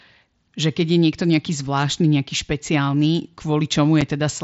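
A brief hole with abrupt edges cuts into the speech at 4.01 s, where it drops out for a moment and resumes. This is unconcealed Bluetooth headset packet loss: a packet on the mSBC link never arrived and silence or an idle pattern filled its slot, a gap that fits a single lost 7.5 ms frame.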